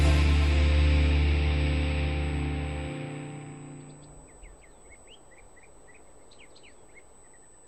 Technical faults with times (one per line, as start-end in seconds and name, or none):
0.00-7.67 USB whine